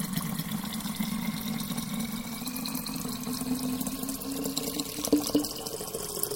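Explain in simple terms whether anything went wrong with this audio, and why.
Doubled audio track, throughout: an equally loud second copy trails about a fifth of a second behind, likely because the sound was captured twice through paths with different delays.

Drift correction step, from 2.43 to 3.03 s: the audio suddenly runs 6 percent faster and a semitone higher, then snaps back, likely software briefly speeding playback to keep two clocks in step.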